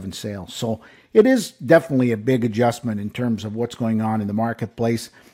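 Speech with clock slip clicks from 0.11 to 5.32 s. Faint ticks repeat about every 70 ms. Each is a single dropped or repeated sample, likely from unsynchronised device clocks about 300 ppm apart.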